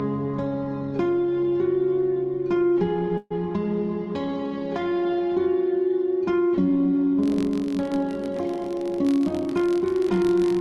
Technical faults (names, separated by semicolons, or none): call audio freeze; filter restarted on every block; jitter buffer speed-up